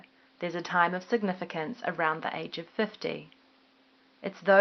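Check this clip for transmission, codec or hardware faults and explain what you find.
Nothing here points to a transmission, codec or hardware fault; the speech comes through the call path steadily, with just some quiet room noise sitting about 34 dB underneath it.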